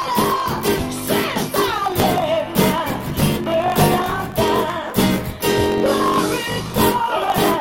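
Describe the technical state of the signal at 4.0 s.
At 4.0 s the signal shows a block size mismatch (truncated), present throughout the clip. One stage writes longer blocks than the next stage reads, and the tail of each block is discarded. The sound points to blocks of 1024 samples being cut short. Each lost tail leaves a seam, so a 50 Hz buzz runs at the block rate, and the audio plays 1.16 times faster while keeping its timbre.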